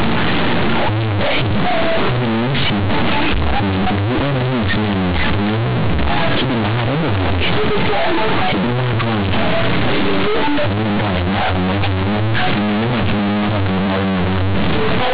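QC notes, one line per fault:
Throughout, companded audio read as linear: the speech was stored as mu-law bytes but played back as plain linear 8-bit samples, so nothing undid the logarithmic compression. Every sign change flips the output across roughly half its range, quiet bits come out as loud as peaks, and the waveform gets badly bent. That's why it's so loud and buzzy, with heavy noise filling the pauses. The underlying telephone-band G.711 coding at 8 kHz sampling is fine; it's the decoding step that breaks it.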